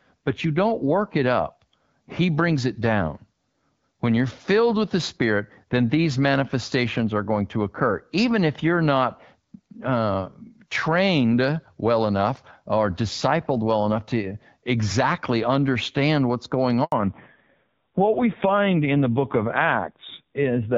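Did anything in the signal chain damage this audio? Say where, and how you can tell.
Yes. At 16.84 s, just after "exactly understand what's going", the speech cuts out for about 80 ms until 16.92 s. This is a handover gap at the network stage: no speech frames arrived while the call switched networks.

From 16.92 s to the end, the speech turns muffled and rougher, with nothing above 4 kHz. This is a fallback to narrowband at the codec stage. The earlier wideband sound, fitting AMR-WB around 12.65 kbit/s, gives way to a coarse AMR-NB mode near 5.9 kbit/s.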